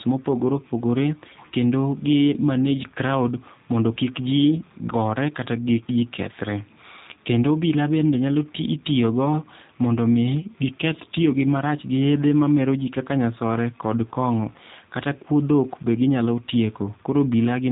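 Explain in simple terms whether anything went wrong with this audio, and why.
The speech went through the G.729 codec, a phone-call format that squeezes the voice into a tiny data stream by rebuilding it from a rough model. The damage is plainly audible throughout: everything above about 3.8 kHz is gone, so the voice sounds muffled, slightly rough and synthetic.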